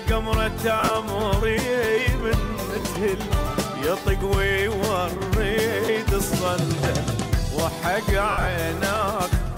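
Lost LE Audio frames break up the sound at 0.80 to 0.91 s, 2.81 to 2.85 s, 5.85 to 5.88 s and 8.31 to 8.47 s. The decoder fills each gap with a noisy, smeared copy of the last spectrum. The final, longest run fades.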